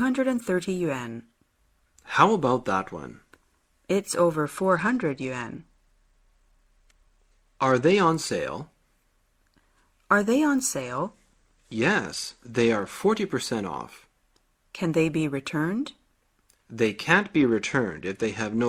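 Bluetooth SBC bit pool drops occur from 4.46 to 8.08 s, from 10.81 to 12.93 s, and from 17.12 s to the end. In each, the encoder apparently cut its bit allocation to cope with a congested link, consistent with the bit pool falling from 28 to 11 and the stream dropping to roughly 90 kbps. The highest sub-bands are starved and the rest coarsely quantised, so the treble turns dull and a gritty, grainy noise rides on the sound for as long as each drop lasts.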